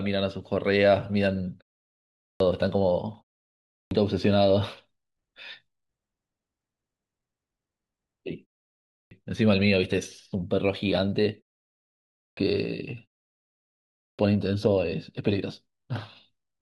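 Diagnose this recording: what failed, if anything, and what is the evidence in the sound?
The playback device is showing clipped start after a pause: after each short gap of roughly half a second to a second, speech restarts abruptly at 2.14, 3.62, 8.84, 12.08 and 13.92 s, missing around 260 to 290 ms. The output sleeps in silence and wakes too late.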